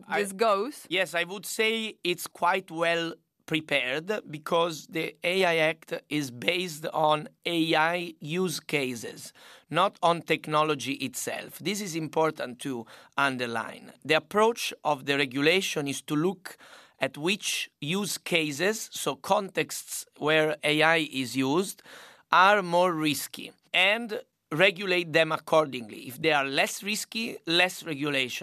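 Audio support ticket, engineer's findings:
Speech signal continuous and stable throughout, with no audible fault on listening and no symptom to attribute to any component.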